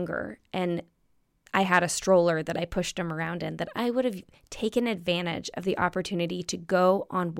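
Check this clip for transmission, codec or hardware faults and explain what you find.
Nothing in this speech recording points to a transmission, codec or hardware problem; the signal stays continuous and steady throughout.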